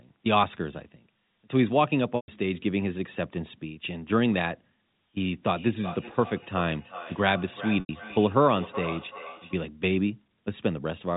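From 2.16 to 2.28 s, packet loss with pitch repetition removes 120 ms of audio. The receiver bridges the gap by looping the last pitch period, so the sound briefly holds on a buzzy tone that fades out before normal audio cross-fades back in.

From 5.52 to 9.63 s, a feedback echo between two devices sets in. A second device in the same room replays the call, its microphone recaptures it, and no echo canceller removes it. Each phrase returns roughly every 0.4 s, thinner and ringing, peaking at about 13 dB below the direct speech.

Inside that echo, at 7.80 to 7.89 s, a second packet loss drops 90 ms. It produces the same held, buzzy repetition and fade before the audio resumes. The narrow G.711 telephone band, with nothing above 4 kHz, is audible throughout.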